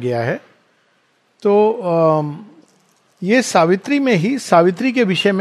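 Nothing in the audio stands out as a technical fault, so there's nothing here to flag.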